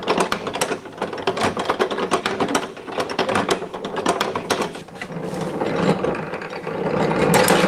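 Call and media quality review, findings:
No audible faults detected across the recording.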